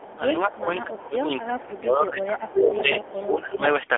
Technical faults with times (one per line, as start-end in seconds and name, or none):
0.00-3.97 AMR narrowband mobile codec
0.00-0.19 echo leak
0.37-3.62 speech suppressed in double talk
0.52-0.64 echo leak
1.59-1.65 echo leak
2.47-3.13 echo leak